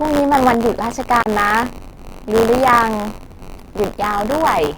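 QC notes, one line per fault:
throughout: buffer tearing. A steady robotic buzz at 93.8 Hz rides on the speech, which fits a 512-sample buffer repeating. The writer and reader of the ring buffer have drifted so they cross inside every period, and a small slice of each buffer, roughly a twentieth, holds audio from about 20 ms earlier, butted against current audio with hard joins. Unlike hum or mains buzz, it vanishes in pauses because it exists only where there is signal.
1.22–1.26 s: block of digital silence. For 40 ms the audio drops to silence and returns with no fade, leaving a short hole. The output buffer was not filled in time, or the samples were invalid and zeroed. Unlike the tearing, this is a single event, not a repeating buzz. Unlike a level dip or a concealed packet loss, the gap is silence with no smoothed-over substitute.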